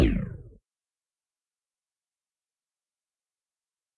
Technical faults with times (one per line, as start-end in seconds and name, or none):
none